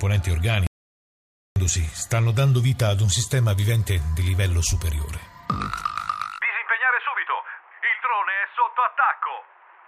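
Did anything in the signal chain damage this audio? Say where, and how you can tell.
Yes. The input link likely failed while recording continued with silence: an audio dropout to silence, 0.67 to 1.56 s, complete silence without room tone.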